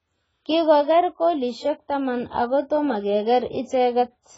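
Throughout, the speech stops dead at 7.7 kHz and its sibilants warble and fizz, which plain low-pass filtering would not cause: likely heavy AAC compression around 16 kbps.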